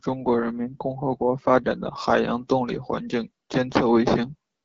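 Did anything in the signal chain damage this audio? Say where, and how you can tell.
Yes. At the codec stage, AMR wideband (HD Voice) coding roughens the speech throughout; its raspy texture fits a low 8.85 kbit/s mode. A spectrogram shows noise-filled bands above 6.4 kHz and nothing past 7.7 kHz.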